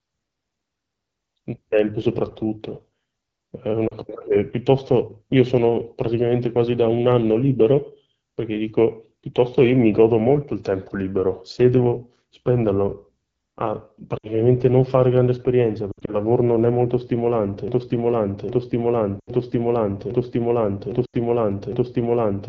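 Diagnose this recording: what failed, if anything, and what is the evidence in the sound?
AMR wideband (HD Voice) codec damage runs through the whole speech clip, at a stage of codec coding. The audio has the rough, raspy texture of AMR-WB at 8.85 kbit/s, one of its two lowest rates. The pulse-driven vocal tract model has too few bits to follow the signal, so the decoded speech is plainly coarse. The top band from 6.4 to 7 kHz is only shaped noise, in place of real detail.

Lost AMR speech frames occur at 3.87 to 3.95 s (40 ms), 14.17 to 14.29 s (60 ms), 15.91 to 16.15 s (100 ms spread over 160 ms, longest run 60 ms), 19.20 to 19.30 s (80 ms) and 21.05 to 21.14 s (80 ms). This is a network and radio-link stage fault. Corrupted frames failed their check, and the decoder reused the last good pitch and vocal tract settings at falling gain. That makes each gap drop to near silence within two frames, and then the voice recovers roughly.

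A broken-record loop starts at 17.68 s and lasts to the end. A fragment of about 0.81 s repeats exactly, back to back, six times, and the speech that should have followed is gone. The likely cause is a playback or streaming stage that stalled and kept resending the last buffered piece. The frame-loss dropouts at 19.20 s and 21.05 s fall inside this looping stretch.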